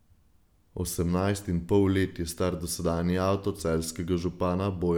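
No technical faults are audible.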